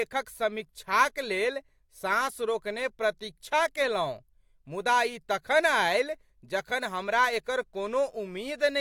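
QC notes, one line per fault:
No fault to note in this speech clip.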